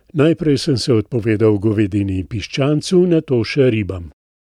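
Speech recording with no technical faults; the only processing evident is a smooth editor's fade-out from about 4 s to 4.14 s, with no click or hard edge.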